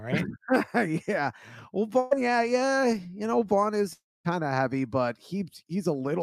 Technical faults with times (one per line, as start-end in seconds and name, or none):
1.99-2.13 burst of packet loss
3.93-4.26 long network dropout